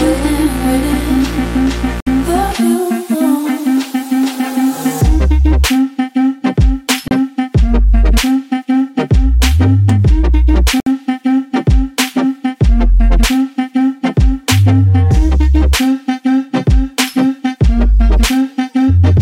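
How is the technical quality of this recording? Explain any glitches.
The recording has three brief dropouts. Sound cuts to silence at 2.00 to 2.07 s, 7.08 to 7.11 s and 10.80 to 10.87 s, lasting about 60, 30 and 60 ms, then resumes. This is likely a Bluetooth stall, where delayed packets let the receiver's buffer run empty.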